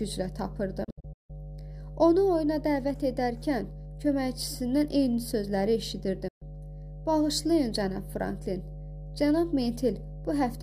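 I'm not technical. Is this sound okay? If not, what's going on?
No. Mains hum runs through the whole clip: a steady low drone at 50 Hz, fairly prominent under the sound. Electricity from the power supply is leaking into the audio, through a grounding problem between connected equipment or a transformer sitting too close.

Digital broadcast dropouts occur from 0.84 to 1.30 s, where the sound breaks into several short holes over about half a second (the longest about 0.16 s), and again from 6.28 to 6.42 s. The receiver lost good data, quickly muted, and resumed once clean signal returned. Whatever played during those gaps is gone.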